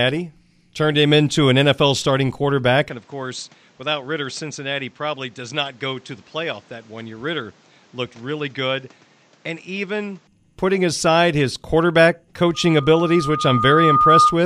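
From 2.89 s to 10.27 s the speech turns duller and about 10 dB quieter, with nothing above 8.2 kHz and a new noise floor, likely an input switched to a poorer device. From 12.54 s to 14.38 s a loudspeaker feedback squeal at 1.2 kHz swells over roughly a second and a half until it sits about 5 dB above the speech.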